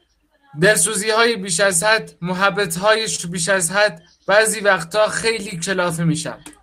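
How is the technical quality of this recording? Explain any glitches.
The recording is a bit glitchy, with two timing problems.

Clock drift between sender and receiver runs throughout: the sender's clock is about one and a half percent slow, so the buffer keeps draining and small uneven hiccups recur.

At 3.16 to 3.20 s there's a short stall from a late packet. The buffer ran dry, so about 27 ms of sound got stretched and held. Nothing was lost, but everything after it lands 27 ms later.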